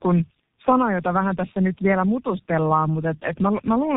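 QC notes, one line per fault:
Throughout: tandem speech coding. The speech passed through G.729A, then G.711 A-law, then G.723.1. Each coder after the first re-encoded the previous one's degraded output, giving rough, warbly, muffled speech with nothing above 3.7 kHz.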